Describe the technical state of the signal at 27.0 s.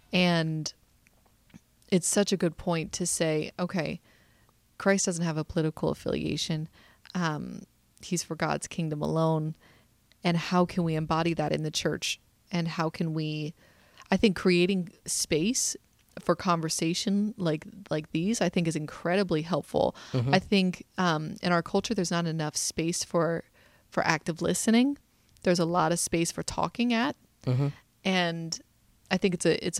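At 27.0 s the speech signal is intact, with no audible technical fault at that moment.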